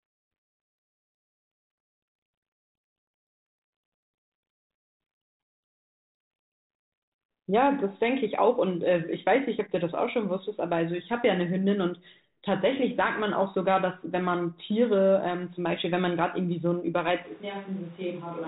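From 1.1 to 6.72 s the speech sinks under harsh, grinding distortion. This is a codec payload misread: the G.726 code words arrive with their bit order reversed, so the decoder rebuilds the wrong differences from its prediction until packing agrees again.

At 17.26 s the voice abruptly turns hollow and roomy, with thinner bass, a drop of about 5 dB and background noise roughly 25 dB below the speech, lasting to the end. This is likely a switch to a distant microphone after the close one dropped out.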